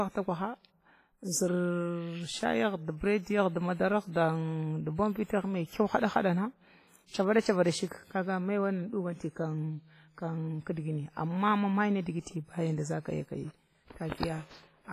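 WMA compression damage runs through the whole speech clip: the sound rings and smears, and a washy hiss rises and falls with the signal. This is likely the work of a Windows Media Audio encoder using long transform blocks. At a low bitrate, which fits roughly 24 kbps, quantisation noise spreads over tens of milliseconds around each sound, and quiet spectral detail is discarded. The damage is heavy, and nothing remains above 15.3 kHz.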